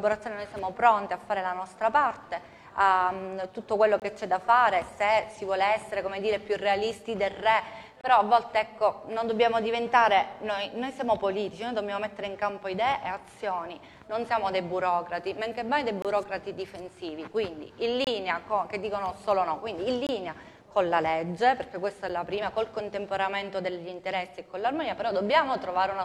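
Gaps between stream segments at 4.00–4.02, 8.01–8.04, 16.02–16.05, 18.04–18.07, 20.07–20.09 and 22.09 s cut hard-edged silences of about 10 to 25 ms into the sound. The two-second spacing fits segment boundaries whose timestamps leave holes that the player fills with silence, without losing audio.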